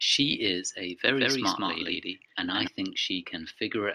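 From 1.08 s to 2.68 s the speech is heard twice: a second, equally loud copy trails the original by roughly 150 ms, giving a hard, slap-like doubling with no reverberant tail or added room tone. The copy cuts in and out abruptly at both ends. This is a doubled audio track, likely caused by the signal being captured again through a slower route, or by an edit that left two misaligned copies mixed together.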